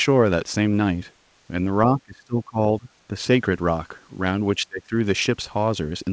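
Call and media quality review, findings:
Speech suppressed in double talk: the talker's level sinks and partly drops out at 1.97–2.58 s, 2.79–2.90 s (shallower dip) and 4.56–4.93 s, with deepest cuts of roughly 25 dB. Likely the echo canceller, unable to separate near-end speech from loudspeaker echo while both sides talk, attenuating both. The call path's band limit at 8 kHz fits G.722 at 64 kbps.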